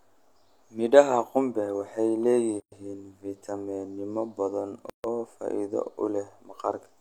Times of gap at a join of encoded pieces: 2.60-2.72, 4.90-5.04

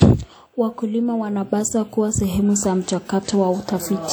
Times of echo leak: none

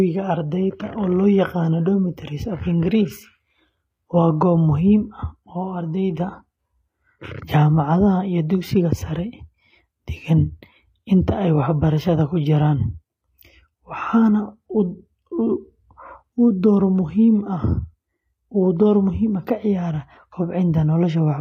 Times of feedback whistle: none

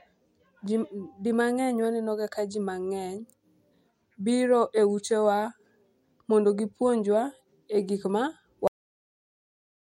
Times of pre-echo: none

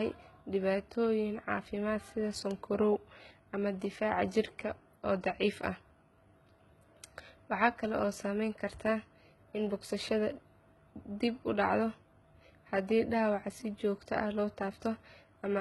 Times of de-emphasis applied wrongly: none

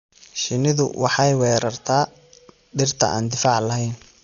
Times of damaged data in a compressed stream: none

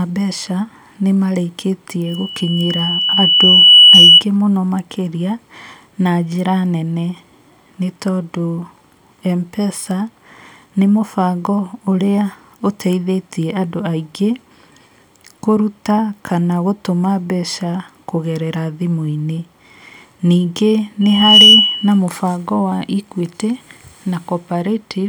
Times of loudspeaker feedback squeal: 2.06-4.24, 21.01-22.00

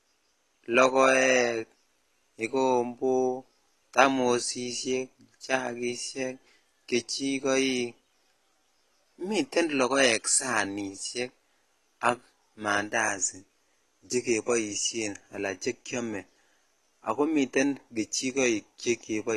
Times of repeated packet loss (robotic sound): none

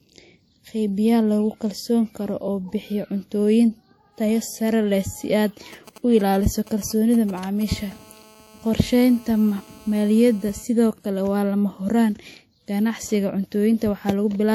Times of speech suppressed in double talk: none

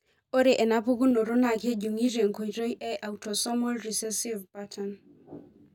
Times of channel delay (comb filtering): 1.11-5.74

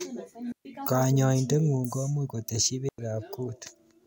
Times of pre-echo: none

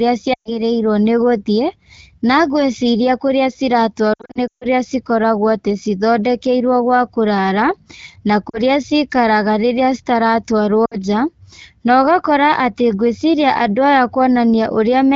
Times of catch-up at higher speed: none

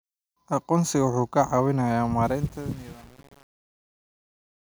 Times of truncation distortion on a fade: 2.23-4.77

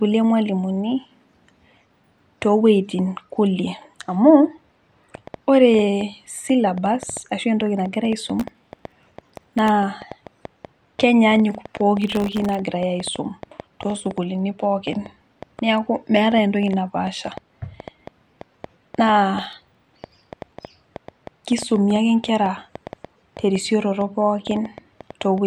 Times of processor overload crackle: 8.40-9.69, 12.02-12.55, 19.40-20.67

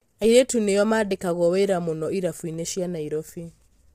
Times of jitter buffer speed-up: none

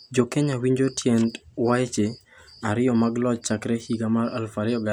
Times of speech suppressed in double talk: none

